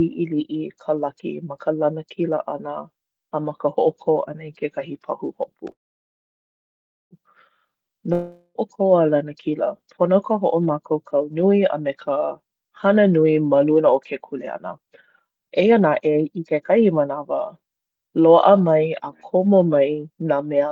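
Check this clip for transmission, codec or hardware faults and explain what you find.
Three kinds of network fault affect this speech clip: a call audio freeze, a long network dropout, and two bursts of jitter buffer speed-up.

From 5.71 to 7.14 s there is a call audio freeze. The last sound carries on as a fading buzz, then about 1.36 s of near silence. The likely cause is packets held up in transit, so the jitter buffer ran dry and the receiver filled about 1.39 s itself. When the speech resumes it picks up exactly where it stopped. Nothing is lost, but everything after it runs about 1.4 s later.

From 8.13 to 8.58 s a long network dropout sounds similar at first: a brief fading continuation, then only about 50 ms of silence. The difference is that the speech comes back further on. About 0.42 s of it was never played, likely because that audio never arrived, so the receiver covered the gap with roughly 0.42 s of filler. 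Unlike the freeze, the listener hears a jump in the speech after the pause.

From 13.81 to 14.87 s and again from 15.28 to 15.80 s the speech runs at about 109% speed. This is jitter buffer speed-up. The receiver had more audio queued than it wanted and trimmed many short pitch-period-sized pieces to cut the delay, removing roughly 100 ms and then roughly 50 ms. The pitch stays the same, which separates it from simple fast playback. The effect is speech that sounds hurried rather than higher.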